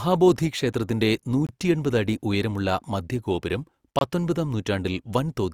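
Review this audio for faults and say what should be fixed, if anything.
Two gaps between chunks break the speech at 1.47–1.49 s and 3.99–4.01 s, each about 23 ms of silence with hard edges. They are spaced about 2.5 s apart, matching the chunk length, and interrupt the sound without losing any. On a waveform each shows as a flat line with abrupt cut-in and cut-out; a spectrogram shows narrow, fully blank vertical stripes across all frequencies. To prevent this, join chunks sample-accurately by trimming any padding and scheduling each chunk to start exactly where the previous one ends.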